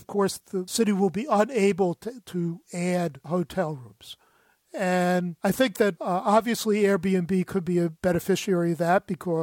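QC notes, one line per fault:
Nothing stood out on listening to the speech in this clip.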